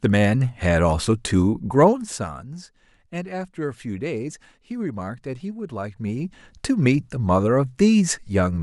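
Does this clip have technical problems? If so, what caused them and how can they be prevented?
Yes. A gain change was applied in coarse 1 dB steps, around thirty a second, without smoothing, so the speech carries zipper noise: a fast ticking as the level falls about 10 dB from 1.8 to 2.4 s and rises again from 5.8 to 6.56 s. Interpolating the gain per sample, or ramping it across each buffer, prevents this.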